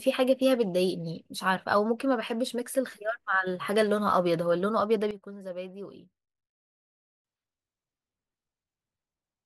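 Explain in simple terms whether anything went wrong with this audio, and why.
At 5.11 seconds the speech and the background noise both suddenly drop to a much quieter level together, then snap back up at 7.25 seconds. This is a sudden gain jump: the volume was likely switched down and back instantly rather than smoothly faded.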